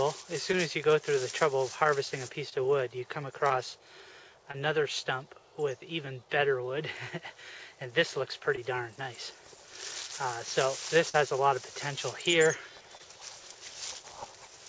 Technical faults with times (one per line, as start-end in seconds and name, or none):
0.52-0.55 short concealed packet loss
2.49-2.54 short concealed packet loss
3.48-3.51 short concealed packet loss
4.51-4.55 short concealed packet loss
8.55-8.59 short concealed packet loss
11.09-11.15 short concealed packet loss
12.97-13.01 short concealed packet loss